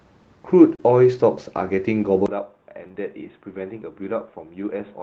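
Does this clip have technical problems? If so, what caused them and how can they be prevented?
Yes. There are three kinds of fault.

Short concealed packet loss occurs at 0.75 to 0.82 s and again at 2.88 to 2.96 s, where two consecutive 20 ms gaps were filled. The receiver extrapolated the preceding sound across each hole, so it is heard as a brief smear. On a spectrogram the harmonics run on unnaturally smooth, then join back. A deeper jitter buffer and a steadier network path prevent this.

A lost packet rebuilt from error correction appears at 0.78 s, 2.84 s and 2.96 s, each 20 ms long. The decoder played the low-bitrate copy carried in the following packet, so these moments sound rougher and grainier rather than silent. A spectrogram shows a thin, noisier vertical slice. Reducing packet loss on the link, or raising the error-correction bitrate, prevents this.

The input switched to a poorer device at 2.26 s and stays that way to the end. 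There is a 20 ms silence at the switch, after which the sound turns dull and boxy, with nothing above 3.8 kHz, compared with the 8 kHz ceiling the 24 kbps Opus path allows before it. The level drops by about 10 dB, and a new noise floor sits about 45 dB below the signal. The waveform visibly shrinks, and the spectrogram's top band goes empty. The likely cause is a switch to another microphone or to a headset's call profile. Locking the input device for the whole session prevents this.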